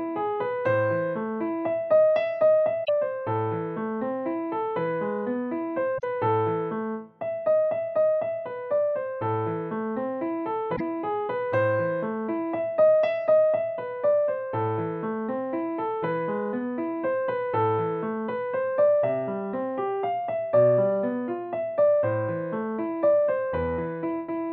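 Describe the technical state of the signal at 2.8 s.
Damaged data in a compressed stream sits right at this point, from 2.81 to 2.89 s, a span of roughly 80 ms. Bytes in that stretch of the encoded stream are corrupt, so the decoder cannot read those frames correctly, loses its lock on the frame structure and scans ahead for the next valid header before resuming. The result is a brief, unnatural chirp, squawk, click or short hole that breaks the continuity of the sound.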